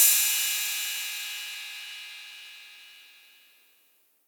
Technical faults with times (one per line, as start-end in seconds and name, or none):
0.98-4.00 word clock ticks